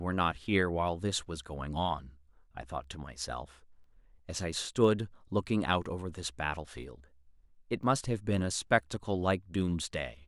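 Periodic USB or driver dropouts recur every 1.0 s from 2.84 s to 9.84 s. Something stalls the audio path at a fixed interval, and each time a tiny fraction of a millisecond of speech is replaced by silence, heard as evenly spaced ticks.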